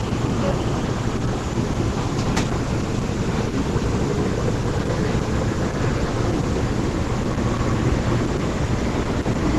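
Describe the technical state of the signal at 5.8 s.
Opus compression runs through 5.8 s and the whole clip: nothing above 12 kHz survives, and the band-filling of a likely low-bitrate hybrid encode leaves the sound plainly rough, grainy and muffled.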